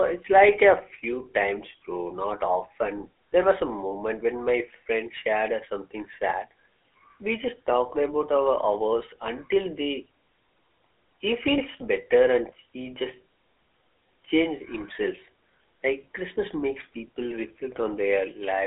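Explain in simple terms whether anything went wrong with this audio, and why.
Yes. The whole recording has passed through the GSM full-rate codec, the original mobile-phone voice coder. It rebuilds speech from a rough pulse-driven model, so voices sound buzzy and gravelly from start to finish, with a narrow phone-line tone and nothing above about 3.7 kHz.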